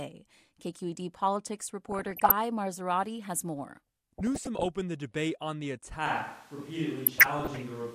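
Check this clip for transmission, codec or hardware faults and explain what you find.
Two faults are audible: three bursts of DAB burbling and, from 6.06 s to the end, a move to a more distant pickup.

DAB burbling occurs at 1.89 to 2.31 s, 4.18 to 4.66 s and 7.06 to 7.61 s. Bit errors, pointing to a rate well under one percent, slip past error correction and corrupt MP2 sub-band levels frame by frame. The result is short blips of noise and sub-bands jumping in level.

At 6.06 s the sound turns roomy and hollow, with thinner bass and room noise about 25 dB below the speech, lasting to the end. This is likely a switch to a distant microphone. It differs from reverb or EQ added later because the change is abrupt, while the level stays roughly the same.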